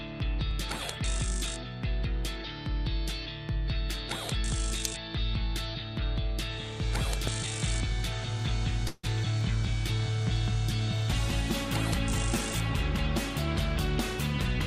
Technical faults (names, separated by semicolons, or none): loud pop; call audio freeze